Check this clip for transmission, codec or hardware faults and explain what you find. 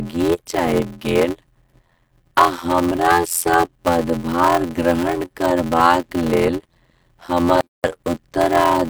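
Two faults are present: a block size mismatch running through the whole speech clip, and one gap at a join of encoded pieces.

Block size mismatch (padded), throughout: each block is read as 512 samples but only partly filled, and the rest is zero-padded. This produces an 86.1 Hz buzz, and the speech runs at 0.625 speed at roughly normal pitch. The waveform shows regular short notches, and the spectrogram shows evenly spaced vertical stripes.

Gap at a join of encoded pieces, at 7.61 s: the separately encoded pieces were joined with their start delay and end padding left in, so there is a gap of about 145 ms. On the waveform it appears as a flat dropout with smeared edges. On the spectrogram it is a vertical blank band with blurred edges, and the speech then resumes where it stopped.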